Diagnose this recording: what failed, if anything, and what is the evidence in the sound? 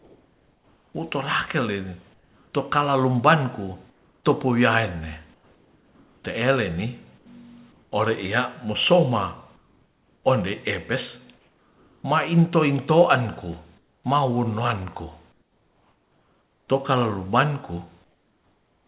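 Comfort noise in place of the background, at the call-processing stage. In pauses at 0.00–2.54, 3.90–7.92, 9.56–12.04 (before "mainto intoanku"), 13.78–16.68 and 18.04–18.87 s, the real ambience turns into steady, featureless noise, about 7 dB lower in the last pause. The likely cause is discontinuous transmission, with the receiver synthesising filler noise while the sender is silent.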